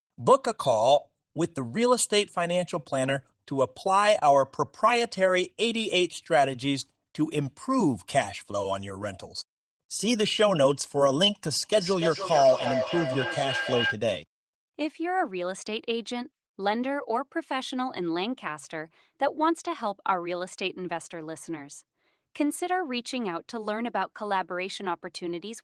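From 11.62 s to 14.0 s there's feedback echo between two devices: two devices on the same call in one room, so one speaker's output gets caught by the other device's microphone and sent back round. Each device's echo canceller only deals with its own playback, so nothing stops the loop. You hear the speech returning roughly every third of a second, thin and ringy, peaking at about 4 dB below the direct speech.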